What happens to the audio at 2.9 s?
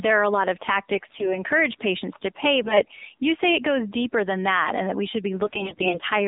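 AMR bit errors hit from 2.62 to 3.05 s, right after "patients to pay" and before "you say it goes." The span fits about twenty 20 ms frames where roughly a tenth of the less protected bits arrived flipped while the frame checksum still passed. The excitation pulses land in the wrong places and the finer pitch, gain and spectral values drift, so the voice keeps its rough pitch and level but turns hoarse, scratchy and gargly. This sits on top of the AMR narrowband mobile codec running at 7.4 kbps across the whole clip. That codec band-limits the line to about 250 Hz to 3.7 kHz and leaves a plainly buzzy, synthetic tone.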